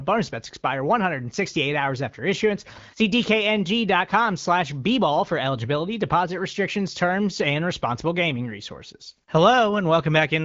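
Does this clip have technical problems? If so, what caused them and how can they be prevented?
No, there are no technical problems in this speech clip. Its sound stops at about 7.4 kHz, which fits an AMR wideband (HD Voice) call path at one of its higher rates, near 16 kbit/s.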